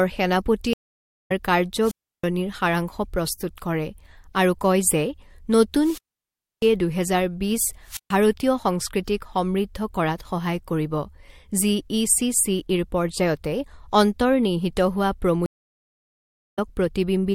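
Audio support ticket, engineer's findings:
Stream reconnect, 0.73 to 1.32 s. Silence of 543 ms. Speech resumes about half a second further on. Connection dropped; player reconnected and restarted its decoder mid-stream. Content during the gap is lost.

Stream reconnect, 15.46 to 16.59 s. Silence of 1.08 s. Resumes slightly later in the stream. Same reconnect path. Network or server side.

Wireless microphone squelch dropout, 1.80 to 2.26 s. Brief hiss rise, then 324 ms mute. Analogue FM radio link faded; receiver squelch closed.

Wireless microphone squelch dropout, 5.76 to 6.72 s. Hiss, then 646 ms mute. Same RF fade at the receiver.

Wireless microphone squelch dropout, 7.84 to 8.12 s. Short hiss, then 135 ms mute. Recurring signal loss on the mic link.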